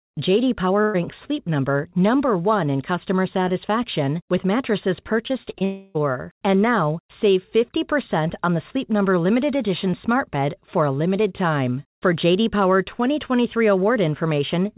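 At 0.82 to 0.96 s a burst of packet loss drops about 120 ms of audio; the receiver stretches the last sound and fades it out before the speech jumps ahead.

From 5.28 to 5.63 s, right after "customer satisfaction with mattresses", repeated packet loss opens four short holes, the longest 34 ms, each patched from preceding audio, giving choppy speech with pieces missing.

From 5.65 to 5.97 s, a likely long network dropout leaves 300 ms with nothing new arriving; a fading continuation of the last sound fills the whole stretch before speech returns with that portion gone.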